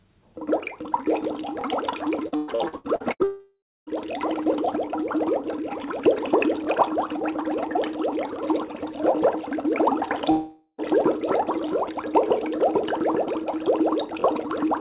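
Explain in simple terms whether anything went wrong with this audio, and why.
Repeated packet loss (robotic sound) runs from 2.28 to 3.23 s. Seven chunks of the audio went missing in quick succession, the longest about 0.12 s. Each hole was patched by stretching the previous sound, so nearly half of that stretch is filler and comes out choppy and robotic.

A long network dropout, most likely, follows right after, from 3.24 to 3.90 s, and another runs from 10.31 to 10.81 s. The last sound is drawn out and fades away, leaving silence: about 0.29 s in the first gap and about 0.07 s in the second. When the audio resumes, the missing part is simply gone.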